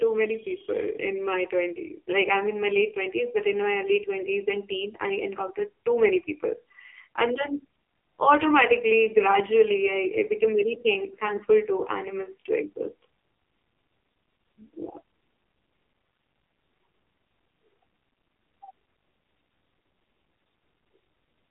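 From start to finish the speech passes through an AMR narrowband mobile codec. The band is squeezed to roughly 300 Hz to 3.5 kHz, and nothing survives above 3.6 kHz. The codec rebuilds the voice from a vocal-tract model driven by sparse pulses. Here it runs starved of bits, which fits a low mode near 5.9 kbps. The damage is heavy. Voices turn buzzy, hollow and synthetic, with dull, muffled consonants.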